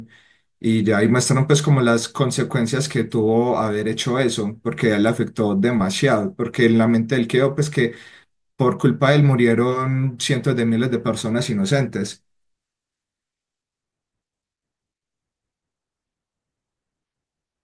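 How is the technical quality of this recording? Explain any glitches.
No technical faults are audible.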